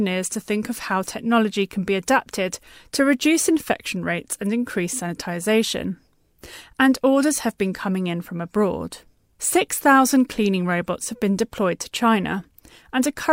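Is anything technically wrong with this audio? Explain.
No, nothing technically wrong can be heard in this speech recording. There are no faults to describe.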